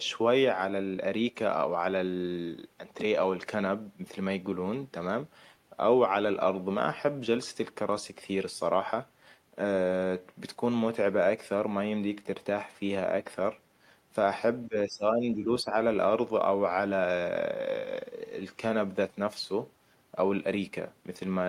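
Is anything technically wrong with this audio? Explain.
Yes. Between 14.68 and 15.74 s the speech level drops, falling by about 10 dB at its deepest, with roughly 0.7 s of that span pulled down. This is speech suppressed in double talk, likely caused by both ends talking at once. The echo canceller could not tell the near talker apart from loudspeaker echo, so its suppressor attenuated everything, and the talker's speech is pushed down along with the echo.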